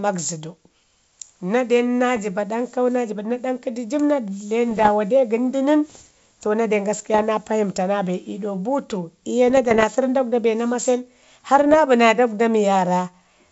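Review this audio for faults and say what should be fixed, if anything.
There are bit errors on an ADPCM link: pops and rough, gravelly bursts with brief level jumps at 2.16–2.23 s (after "den na"), 4.70–4.89 s, 7.14–7.23 s (after "to na den"), 9.48–9.85 s and 11.59–11.78 s (just before "bi naa dagwda"). Each flipped bit knocks the decoder's step size and predictor off track, so the damage rings on briefly instead of staying a single click. To prevent this, clean up the radio or transmission link, or add error protection on it.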